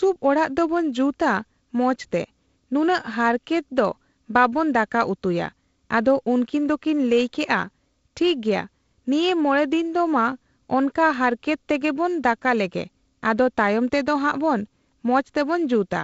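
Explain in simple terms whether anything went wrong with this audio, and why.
A faint, steady ticking runs through the speech from about 0.12 s to 16.02 s, roughly ten ticks a second. These are clock slip clicks. The likely cause is two pieces of equipment each keeping time with their own clock, one running fast by a few hundredths of a percent. Each time the gap adds up to one full sample, a sample is dropped or repeated, leaving a tiny tick. The wideband telephone coding carrying the audio works as it should.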